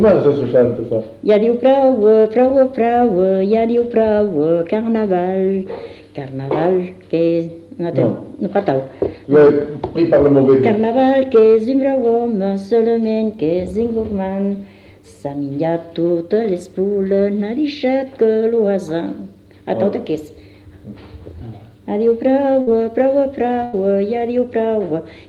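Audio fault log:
22.61 s and 23.65 s, burst of packet loss: a run of packets went missing or arrived too late to play, leaving about 60 ms of audio lost at 22.61 s and about 80 ms at 23.65 s. Each time the receiver stretched the last sound across the hole and let it fade, so the gap comes out as a dimming held buzz or hiss. The sound then resumes further along with that stretch gone, over an Opus call path whose top end stops near 12 kHz.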